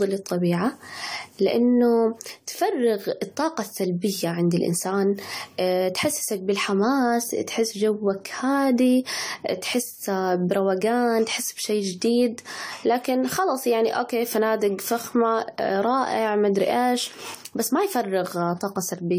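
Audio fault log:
Throughout: generation loss. The speech sounds swirly, smeared and hollow, and attacks are blurred. The likely cause is about four rounds of lossy re-encoding, fitting an AAC codec near 64 kbit/s. Each pass quantises on a shifted frame grid, so noise and spectral holes build up.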